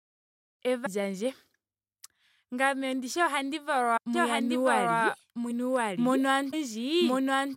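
At 0.85 s and again at 3.96 s, just after "ndishi ohandi", compressed frames are skipped: roughly 300 ms of speech, about ten frames of what fits a 26.1 ms frame length, never plays. Overlapping frames smear each join into a short blip, not a click.

From 4.13 s to the end, a doubled audio track appears: a full-band copy of the speech at about the same level, trailing by roughly one and a half seconds, dry and switching on abruptly. A second, slower capture path is the likely cause.

Further frame skips at 5.50 s (roughly 200 ms) and 6.52 s (roughly 300 ms) give the same smeared jumps.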